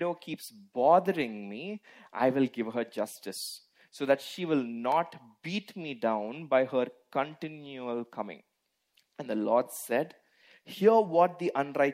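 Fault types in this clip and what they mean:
Electrical switching spike: there's a single sharp snap at 4.92 s, over in a few milliseconds and sitting right on top of the sound rather than replacing it. It peaks around -25 dBFS. The cause is likely a nearby switch, relay or static discharge arcing briefly and the audio line picking up that burst of interference.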